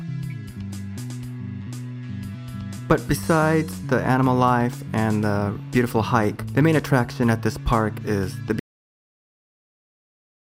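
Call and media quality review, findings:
Cut-off end at 8.6 s: sound stops mid-event and drops straight to digital silence for the remaining 1.9 s, no decay tail at all. Points to the final buffers never getting flushed to the writer or output, so the tail was just lost.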